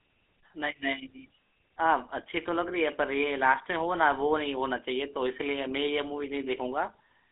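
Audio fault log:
Throughout: GSM full-rate codec. The speech passed through the original GSM coder, which models the vocal tract and excites it with a coarse regular pulse train at around 13 kbps, inside a 300 Hz to 3.5 kHz line band, leaving a plainly audible buzzy, gravelly roughness over thin, band-limited speech.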